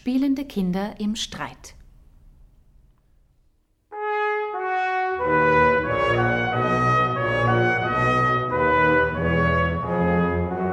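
No technical faults can be heard anywhere in this recording.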